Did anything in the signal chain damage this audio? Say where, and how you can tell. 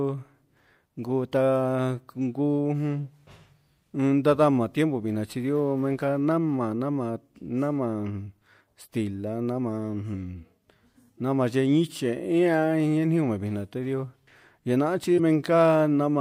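Yes. A brief glitch cuts through the speech from 15.16 to 15.20 s. That points to damaged data in a compressed stream at the codec stage: corrupted bytes made the decoder misread those frames and lose sync until it found the next valid frame header.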